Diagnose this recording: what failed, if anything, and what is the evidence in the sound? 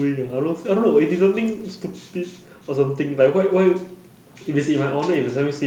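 Listening closely to the speech, nothing stood out that would point to a failure at any stage of the chain.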